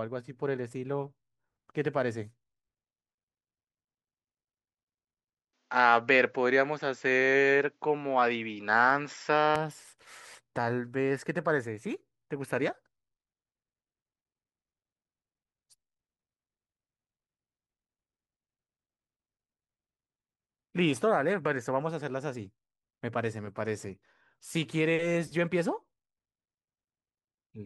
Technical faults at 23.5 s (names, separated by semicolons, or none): none